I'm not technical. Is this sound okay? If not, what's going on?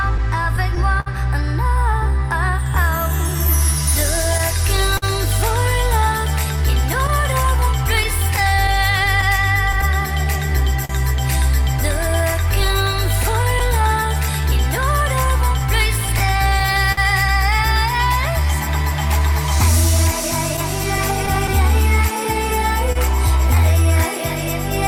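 No, not quite. There's clock drift between sender and receiver: the sending end's clock runs roughly 3% slow compared with the playback end, so the audio keeps arriving a little behind and the player has to keep covering for it the whole way through.

To cope, the player makes repeated timing corrections from about 0.06 s to 23.84 s, quietly repeating tiny slivers so playback runs at about 99% speed. Together that adds around a third of a second. If you notice it at all, it's as a faintly uneven, draggy pace.

Right at the start, from 0.18 s to 1.08 s, there are repeated stalls (stutter). The buffer ran empty four times, and the player stretched the last sound to fill 78 ms in total, the longest pause 59 ms. Nothing is lost, but it hiccups.

Then come scattered short gaps in five stretches: 3.47 to 5.04 s, 7.07 to 10.91 s, 13.22 to 13.81 s, 15.38 to 16.99 s, and 20.56 to 21.50 s. Each holds roughly three to ten tiny holes, none longer than about 50 ms, patched by extending the previous sound, so you hear brief ticks or smears.

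Finally, a short stall from a late packet at 22.92 to 22.97 s: one chunk showed up late, so the sound there is held for an extra 28 ms, a small catch or dip before it carries on.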